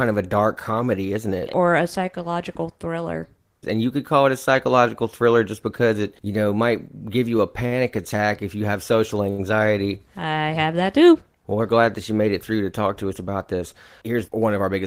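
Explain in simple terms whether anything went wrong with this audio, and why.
A short stall from a late packet happens twice, at 7.66 to 7.73 s and 9.30 to 9.40 s. Each time a piece of the speech arrived late, so the receiver held the last sound for about 49 ms and then 80 ms until it came. Nothing is lost, but a sound lingers briefly.

A jitter buffer speed-up follows at 14.02 to 14.49 s. Having fallen behind, the receiver caught up by snipping out tiny slices of the speech, about 40 ms in all. That part plays roughly 8% faster at the same pitch and sounds slightly rushed.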